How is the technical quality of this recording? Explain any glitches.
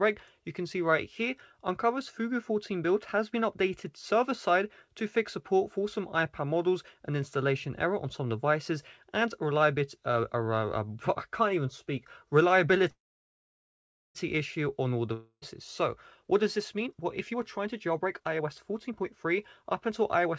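The recording has three distinct glitches in its final eight seconds, all typical of audio carried over a network call. Throughout, the sound is band-limited, with nothing above 8 kHz, consistent with a wideband call codec such as G.722 at around 64 kbps.

Call audio freeze, 12.90 to 14.17 s. A stall in packet delivery most likely emptied the receiver's jitter buffer. With nothing new to play, the receiver stretched the last sound into a short fading buzz, then about 1.17 s of silence. When the packets arrived, playback resumed exactly where it stopped. Nothing is lost, but a gap of about 1.25 s has been inserted, and everything afterwards runs that much later.

Long network dropout, 15.13 to 15.44 s. Here the audio itself is missing, most likely because packets never arrived in time to be played. The receiver again extended the last sound as a fading hiss, ending in roughly 70 ms of silence. 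The sound then picks up further along, with about 0.28 s of material gone, so there is an audible jump rather than a simple pause.

Jitter buffer speed-up, 16.23 to 20.32 s. After the disruptions, delayed audio piled up in the buffer beyond its target depth. To shed the backlog, the receiver repeatedly cut out tiny segments one or a few pitch periods long. Playback runs at about 115% speed without any change in pitch, so this stretch sounds hurried. Roughly 0.7 s of audio is trimmed away in total.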